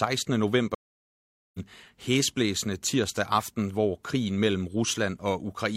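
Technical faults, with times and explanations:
0.75–1.60 s, stream reconnect: the speech drops out for about 0.79 s and then picks up again at "hæsblæsende tirsdag aften hvor", roughly 0.7 s further along. The connection broke, and the player reconnected and started a new decoder mid-stream, skipping the missed stretch.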